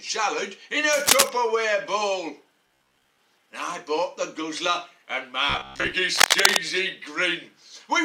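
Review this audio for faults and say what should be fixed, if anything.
A worn cable or connector likely shifting contact gives cable scratch noise: dense, uneven scratching about 5 dB above the sound, from 0.93 to 1.30 s and 6.16 to 6.62 s.

Audio likely arriving too seldom, so short buffers repeat, gives robotic sound from repeated short buffers: a rigid 66.8 Hz metallic buzz from 2.67 to 3.19 s and 5.50 to 5.95 s.

Replace the cable and enlarge the playback buffer beyond roughly 15 ms.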